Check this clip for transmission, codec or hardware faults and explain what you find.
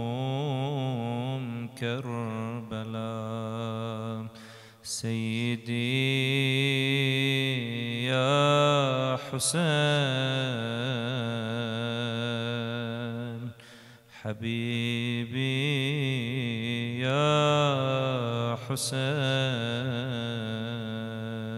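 One fault shows up, a channel delay with comb filtering from 16.46 to 17.46 s. One channel runs late by about two hundredths of a millisecond, which points to a single-sample offset. When the two channels are summed to mono, the first cancellation falls up around 20 kHz, so the top end rolls off gently and that second sounds slightly dull rather than hollow. Unlike a low-pass cut, the loss is a smooth tilt with no sharp edge.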